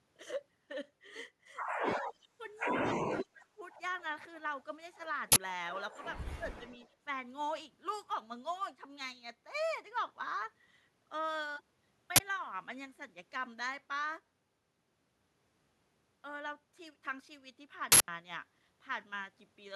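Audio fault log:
1.81–1.85 s, 2.03–2.41 s, 2.99–3.58 s, 6.39–6.62 s: speech suppressed in double talk. The speech dips by about 5, 15, 25 and 15 dB, deepest at 2.99–3.58 s. This is likely an echo canceller that couldn't separate the near talker from loudspeaker echo while both sides spoke, so it turned everything down.
2.03–2.13 s, 6.70–6.89 s: echo leak. A faint delayed copy of the speech returns about 240 ms late, at about 15 dB and then about 30 dB below the speech. This likely comes from loudspeaker pickup that the far end's echo canceller failed to remove.
5.32–5.36 s, 12.16–12.20 s, 17.92–18.08 s: uninitialised buffer. Short, loud bursts of digital noise last 40 ms, 40 ms and 160 ms. A block was played before any audio was written to it, so leftover memory contents came out as samples.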